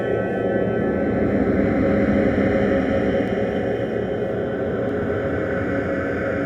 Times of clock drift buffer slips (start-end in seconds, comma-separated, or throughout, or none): 1.66-4.89